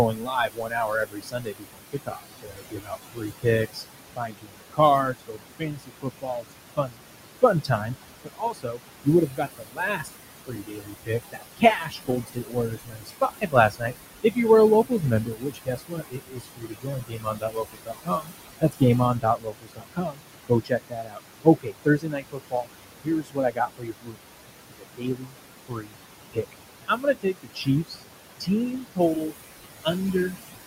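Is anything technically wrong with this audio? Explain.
Yes. There are noise suppressor artifacts throughout the speech. The room noise, which sits about 10 dB under the voice, drops away in the pauses and comes back under each phrase. A noise suppressor estimates the steady background and pulls down every frequency band it judges to be noise, frame by frame. Here it cuts that noise by about 21 dB.

The same processing also causes speech cut by the noise suppressor, from 0.06 s to 30.61 s. Soft consonants, word endings and quieter stretches sound swallowed or faint, sinking by as much as about 22 dB at the deepest point. This adds up to roughly 15 seconds of affected speech. The suppressor mistakes those low-level parts of the voice for background and turns them down along with the room noise.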